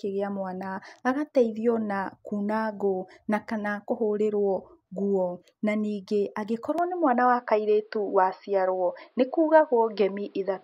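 A speech recording that abruptly turns duller at 6.78 s and stays that way to the end: nothing above 5.5 kHz survives, the level shifts by around 5 dB, and a faint new background noise appears, with no gap at the change. The likely cause is an input switched to a poorer device mid-recording.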